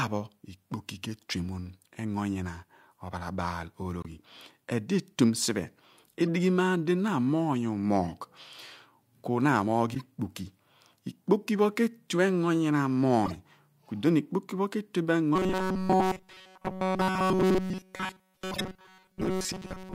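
At 4.01 to 4.06 s the speech drops into a corrupt frame muted gap: about 50 ms of sudden silence, consistent with two compressed frames damaged badly enough that the decoder rejected them and the player filled the hole with nothing. The cut begins abruptly, and the speech resumes on schedule afterwards, so timing is preserved across the gap.

Corrupt frame decoded errors follow at 6.27 s, 9.91 to 10.01 s, 13.26 to 13.35 s and 18.53 to 18.61 s. In each case damaged frames were decoded rather than discarded, so misread gains and codes put energy at the wrong frequencies for a few frame lengths. The first is faint, around -35 dBFS at its peak. The later ones grow steadily louder, with the last one near -15 dBFS.

From 15.36 s to the end, the speech turns into a rigid, metallic buzz at 188 Hz. The buzz still loosely tracks the speech. This is robotic sound from repeated short buffers. The likely cause is audio arriving too late, with the playback side looping the last fragment, roughly 5 ms long, which fits the buzz period. 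Essentially all of this stretch is made of repeats. The 18.53 s decoding burst sits inside this buzz.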